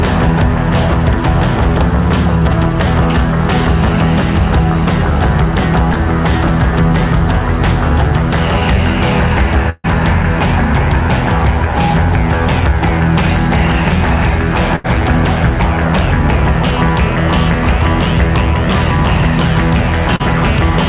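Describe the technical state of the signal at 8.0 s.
At 8.0 s the signal is intact, with no dropout, glitch or distortion; it carries the narrow band of a telephone-style call path, with nothing above 4 kHz, which fits a G.711 mu-law codec at 64 kbps.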